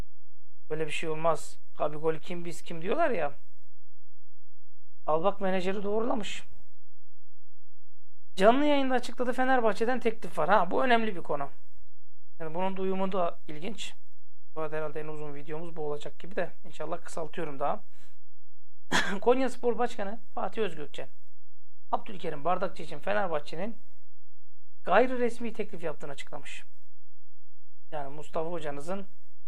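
A DC offset of about -24 dBFS shifts the whole waveform off zero throughout the audio, wasting headroom and leaving steady energy at the very bottom of the spectrum.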